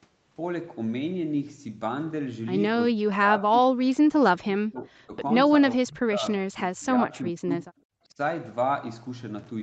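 Speech suppressed in double talk runs from 2.93 to 5.13 s, then recurs at 5.77 to 6.24 s, 6.5 to 7.13 s, 7.66 to 7.78 s and 8.05 to 8.18 s. The speech dips sharply and breaks into pieces, falling by up to about 35 dB in the first three stretches and less deeply, around 15 to 25 dB, in the brief later ones. The likely cause is an echo canceller that could not separate the near talker from the far-end sound echoing off the loudspeaker and turned both down.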